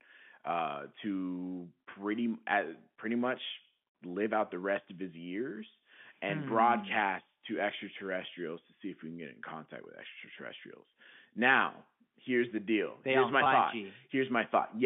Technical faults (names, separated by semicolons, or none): packet loss with pitch repetition